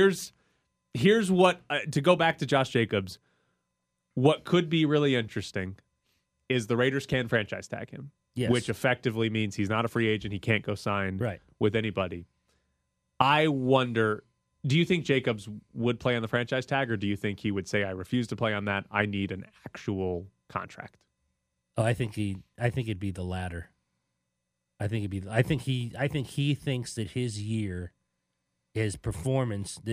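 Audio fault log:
No technical faults can be heard anywhere in the recording.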